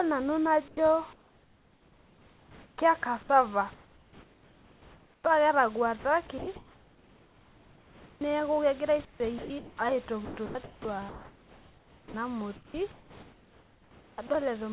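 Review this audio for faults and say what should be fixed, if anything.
Comfort noise in place of the background, 0.68 to 0.77 s, 1.13 to 2.78 s, 3.74 to 5.24 s and 9.05 to 9.77 s: in these pauses the room's real background gives way to a smooth, featureless hiss, about 5 to 7 dB quieter in the first three. This is likely discontinuous transmission, with the receiver synthesising noise while the sender stays silent. Prevention: disable discontinuous transmission, or improve the comfort-noise spectral updates so the fill matches the real background.

Sound chopped by the voice detector, 6.38 to 8.21 s (ending just before "neeku kegira"), 10.25 to 12.14 s and 12.56 to 14.3 s: the speech keeps cutting in and out against synthetic noise, losing quiet syllables and word edges. The likely cause is the sender's voice detector toggling repeatedly. Prevention: lower the detector's threshold and add a longer hangover so it stops switching mid-phrase.

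Sound dropped by the voice detector, 9.38 to 9.5 s, shortly after "neeku kegira": about 120 ms of sound vanishes under steady noise, then returns. The likely cause is the detector mistaking a quiet stretch for background and halting transmission. Prevention: use a less aggressive detector mode so quiet speech is still sent.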